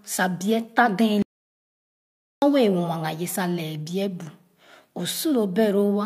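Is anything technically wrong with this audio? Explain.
Yes. From 1.22 s to 2.42 s the speech cuts off abruptly and the clip falls into dead, total silence for about 1.2 seconds, with no room tone or background hiss underneath, before the speech resumes mid-flow. This is an audio dropout to silence. The likely cause is a lost input, such as a disconnected device, a failed link or an accidental mute, while the recorder kept writing silence. Whatever was said during that gap is gone.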